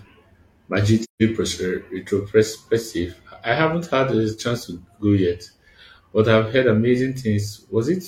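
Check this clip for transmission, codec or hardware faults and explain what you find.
One codec fault is present: AAC frame loss with muting, from 1.03 to 1.22 s. The decoder zeroed the lost spectrum, so overlapping windows fade the speech out and in, leaving a soft 170 ms hole that fits four lost frames. Unlike a raw sample dropout, both edges are faded.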